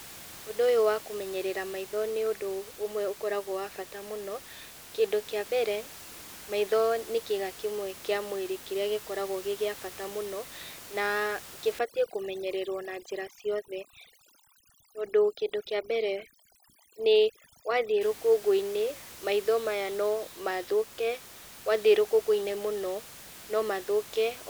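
From 11.79 s to 18.01 s the speech shows overdone noise removal. The room noise, sitting about 18 dB below the speech, drops and breaks up into twinkling specks, as a noise reducer set far too strong shuts off individual frequency bands near its noise estimate and takes quiet speech detail with them. A spectrogram shows the background turning into scattered isolated dots and ragged, hollowed-out speech bands; the waveform's floor drops.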